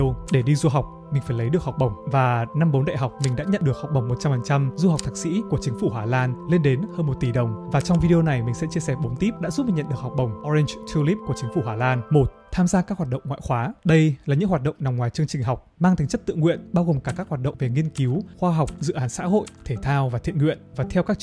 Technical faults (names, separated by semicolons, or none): none